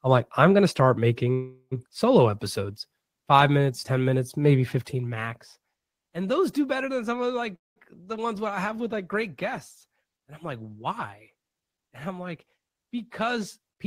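Speech with two call audio freezes, at 1.33–1.73 s after "I'm going to start" and at 7.55–7.78 s after "better than some of". The likely cause is delayed packets draining the jitter buffer. The last sound is stretched into a fading buzz, which shows as smeared horizontal bands on a spectrogram and a decaying waveform ending in roughly 60 ms and 180 ms of flat silence. Speech resumes intact, with nothing lost, but about 380 ms and 206 ms later. A jitter buffer speed-up runs from 12.46 to 13.85 s, after "I'm like". Pitch-period snippets totalling about a tenth of a second are cut, so speech plays about 7% fast and sounds hurried. Harmonic spacing stays unchanged, while syllables visibly compress in time.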